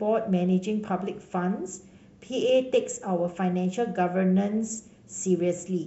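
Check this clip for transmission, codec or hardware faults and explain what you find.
Listening to the speech here, nothing stood out as a transmission, codec or hardware problem.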